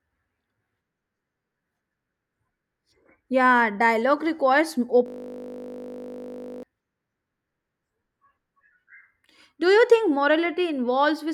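Right after "dialogue requires", from 5.06 s to 6.63 s, the speech collapses into a steady buzz at 50 Hz. This is a system hang loop: the system froze while the audio hardware kept replaying one 20 ms buffer, looping it nearly 80 times.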